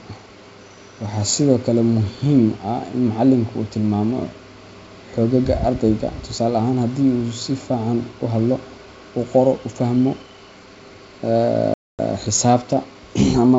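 Packet loss on an ADPCM call cuts a hard-edged silent hole into this speech clip from 11.74 to 11.99 s, about 250 ms, which points to a burst of roughly thirty lost packets. The missing stretch is filled with silence, so the receiving decoder's adaptive predictor and step size drift away from the sender's. When speech resumes after the gap it comes back slightly distorted, settling over the next few tens of milliseconds. The surrounding wideband sound, clear up to about 7 kHz with faint upper-band hiss, fits G.722 telephone coding at 64 kbit/s.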